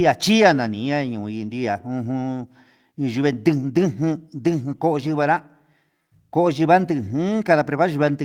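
Lost packets rebuilt from error correction at 0.85–0.87, 3.13–3.15, 5.03–5.09 and 6.35 s: low-bitrate backup copies fill each gap, so the speech continues but briefly turns rougher and noisier.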